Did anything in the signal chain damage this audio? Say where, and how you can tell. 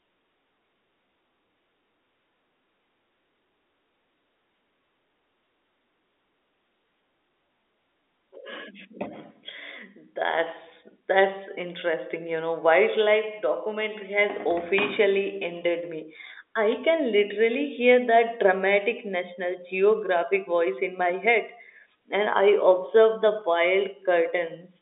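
No, nothing in the chain damaged this speech.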